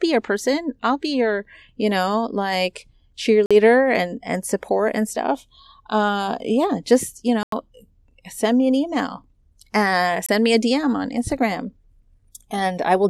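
Blocks of digital silence at 3.46–3.51 s, 7.43–7.52 s and 10.26–10.29 s (about 46, 93 and 23 ms): the output buffer went unfilled, so the speech drops abruptly to silence and back.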